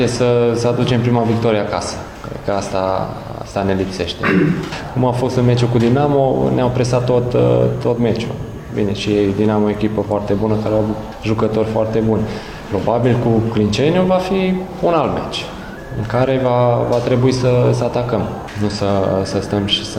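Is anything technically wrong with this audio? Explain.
Yes. At 18.70 s to 18.77 s there is a short AAC frame loss with concealment. About 43 ms of audio is missing, consistent with a single lost AAC frame. The decoder bridged the gap by reusing the spectrum from the preceding good frame, with its phase and fine detail approximated rather than reconstructed. The result is a brief smeared, noisy or phasey patch where the sound loses its crisp detail before normal decoding resumes.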